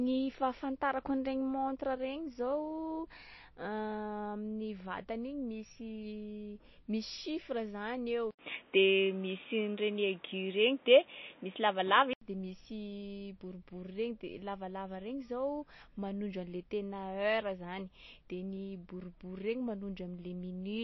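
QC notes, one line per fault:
Throughout: MP3 compression, treble stops at 5.8 kHz with watery, swirling speech, likely a low bitrate near 26 kbps; constant, unlike a device change.
8.31–12.21 s: input switched to a poorer device, likely; 80 ms gap, then dull boxy sound cut at 3.8 kHz, new faint background noise, modest level shift, restored after.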